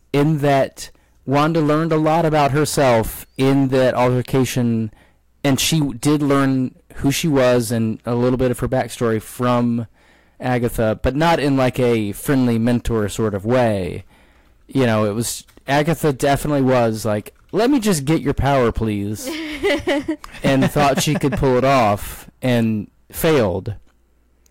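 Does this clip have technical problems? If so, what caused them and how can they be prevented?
Yes. Hard clipping runs through the whole speech clip. The signal reaches the converter or gain stage about 14 dB hotter than it can pass, so every peak is sliced off flat, and roughly a tenth of all samples are cut off at the clipping limit. That turns each loud syllable into a harsh fuzz. On a waveform the peaks look squared off, and a spectrogram shows energy smeared far up into the high kHz range. Setting input gain so peaks stay several decibels below full scale prevents it.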